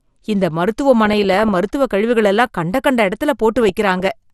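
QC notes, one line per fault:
throughout, MP2 compression: the speech sounds dull and granular, with a gurgly edge as upper bands drop in and out and the remaining bands are quantised coarsely. This is likely MPEG Layer II starved of bits, consistent with a low rate around 80 kbps.
1.05–1.56 s and 3.63–4.05 s, DAB burbling: bursts of noise blips in single sub-bands. The first comes right before "மருத்துவக் கழிவுகள் எல்லாம் கண்ட" and the second right after "எல்லாம் கண்ட கண்ட இடத்துல". Bit errors slipped past error correction and corrupted samples, putting short blips of noise into individual sub-bands. The damage spans many frames (22 and 26), at a bit error rate of roughly 0.5% and 0.3% respectively.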